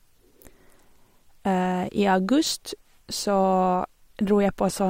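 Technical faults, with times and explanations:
Nothing stood out as a technical fault on listening to this speech recording.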